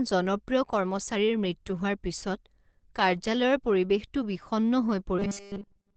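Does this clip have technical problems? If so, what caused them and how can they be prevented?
Yes. Throughout the speech, everything above about 8.4 kHz is missing and the voice sounds muffled and hoarse, plainly audible damage that is likely from Opus compression in its SILK speech mode at a wideband setting, consistent with a bitrate around 16 kbps. Encoding at a higher bitrate keeps the codec out of this wideband speech mode.

From 5.19 s to the end at 5.97 s, just after "কাৰ্যালয়ৰ পৰিৱেশটো বিষণ্ণ", there is robotic sound from repeated short buffers. The sound becomes a rigid metallic buzz at 200 Hz, which fits a 5 ms buffer being replayed, and most of the audio in that stretch is repeats. This is likely caused by audio arriving too slowly. A larger playback buffer or a steadier delivery path prevents it.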